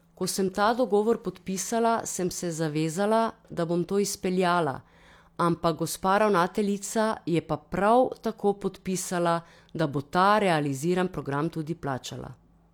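Nothing in this recording of speech stands out as a technical fault at any point along the way.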